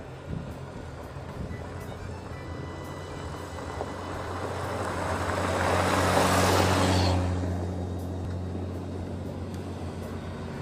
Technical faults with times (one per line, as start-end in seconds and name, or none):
4.27 overlap between stream segments
8.25 overlap between stream segments